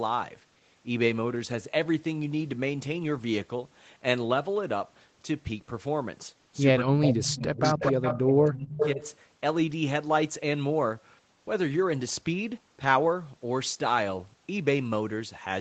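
From 6.86 to 9.01 s the voice keeps dipping, by up to about 30 dB and for roughly a second and a half in total. That's likely speech suppressed in double talk, with the canceller ducking the talker while the far side speaks. Over the same stretch, at 7.12 to 7.88 s, 8.06 to 8.20 s and 8.61 to 9.15 s, a delayed copy trails the voice by about 0.28 s. It's fairly loud, only a few dB under the speech by the end, which is likely echo leak from a loudspeaker end that isn't fully cancelled.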